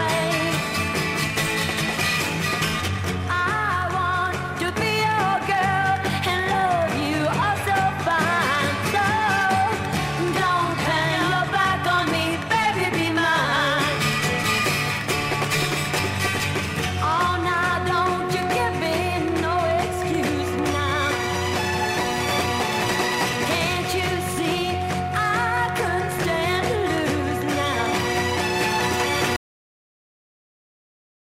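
At 29.36 s the audio has a cut-off end. The sound stops abruptly mid-event, with no natural decay. The final buffers were never written or played back. What follows is about two seconds of flat digital silence, lasting to the end.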